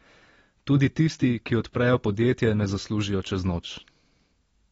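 AAC compression runs through the whole clip: the speech has nothing above 7.7 kHz and sounds dull and smeared, with plainly audible codec damage. The likely cause is low-bitrate AAC-LC coding, consistent with about 24 kbps, lowering the cut-off and coarsely quantising frequency content.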